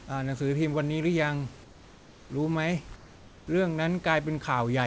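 Comfort noise in place of the background appears from 1.64 to 2.30 s and again from 2.96 to 3.47 s. In both pauses, where the background sits about 24 dB below the loudest speech, the room's detailed ambience gives way to a smooth, featureless hiss, about 3 dB and then about 2 dB quieter. The likely cause is discontinuous transmission: the sender stops during silence and the receiver fills the gap with generated noise.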